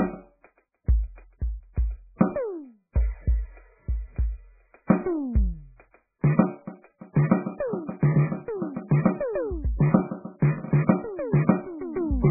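It's a piece of music, and from start to finish it's badly mangled by what's likely heavy MP3 compression. Everything above about 2.5 kHz is simply gone, so the whole thing sounds dull and boxed-in, and what's left has that watery, swirling quality you get when weak frequency lines flicker in and out between frames. Attacks smear too. The damage is severe enough to fit a starved bitrate, something around 8 kbps.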